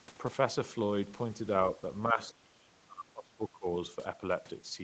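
From 2.06 to 3.66 s the speech dips, falling by roughly 25 dB at its deepest, for about a second and a half in total. This is speech suppressed in double talk, likely an echo canceller turning down the talker while the far end spoke.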